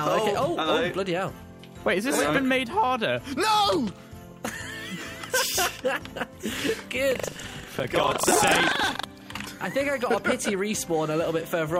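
Buffer tearing from 7.08 to 9.05 s: writer and reader slipped, so each 40 ms period splices in a small slice of audio from a lap earlier, producing a 25 Hz rattling buzz.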